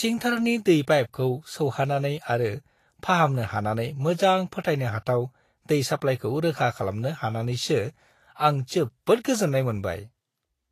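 Throughout, the speech has a hissy, grainy treble with nothing above 14.2 kHz and roughened tones, likely from Vorbis compression at a bitrate near 34 kbps.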